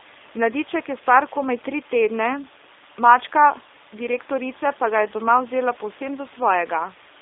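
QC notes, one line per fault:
Throughout: G.729 codec. The speech is narrow and telephone-like, confined to about 300 Hz to 3.7 kHz, with a plainly audible rough, buzzy, synthetic edge. The room noise, about 26 dB below the speech, picks up a warble. The codec rebuilds each 10 ms frame from a vocal tract filter, a pitch predictor and a few pulses rather than the original waveform. The coarseness fits an 8 kbit/s G.729A stream.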